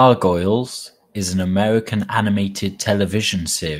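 A lost packet rebuilt from error correction occurs from 2.43 to 2.53 s. The speech never drops out, but about 60 ms comes through rougher and noisier, which points to three lost packets replaced by the low-bitrate copies carried in the packets that followed.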